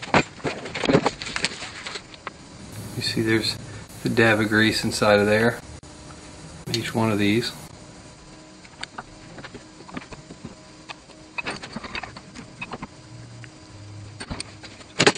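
A gap at a join of encoded pieces opens at 5.79 s and lasts about 40 ms, until 5.83 s. The audio was encoded in separate pieces and spliced back together without trimming, so the silent start-up delay of one encoder run and the padded final frame of the previous run both remain. The result is a brief dropout with smeared edges, after which the sound resumes exactly where it broke off.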